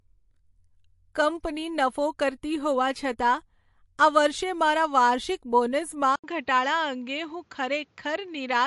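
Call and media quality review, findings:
Throughout: watery, swirly texture and treble gone above 11.3 kHz, likely MP3 compression at a low bitrate near 48 kbps. Spectrogram shows a hard ceiling and flickering high-frequency holes.

6.16 s to end: 80 ms gap, then duller, narrower sound capped at 7.6 kHz with a faint new noise floor, likely an input switched to a poorer device. Waveform level roughly unchanged.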